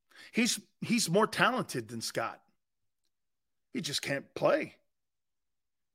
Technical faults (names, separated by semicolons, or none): none